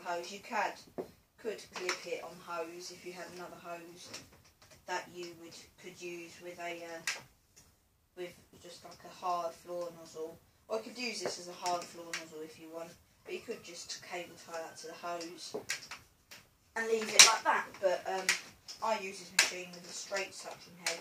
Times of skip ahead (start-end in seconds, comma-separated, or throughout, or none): none